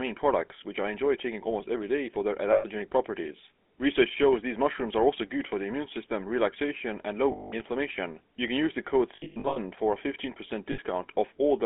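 The whole recording passes through the GSM full-rate codec, audibly so: the pulse-driven vocal-tract model gives the speech a buzzy, gravelly grain. Unlike plain band-limiting, the roughness sits in the excitation itself, while the line band runs about 250 Hz to 3.4 kHz.

Lost GSM frames then hold the last good sound as a metallic ring rather than a clean gap or click: 120 ms at 2.52 s after "every day for their", 200 ms at 7.32 s after "immune system relaxation and", 300 ms scattered between 9.16 and 9.59 s after "can use the code" with the longest run about 100 ms, and 60 ms at 10.72 s.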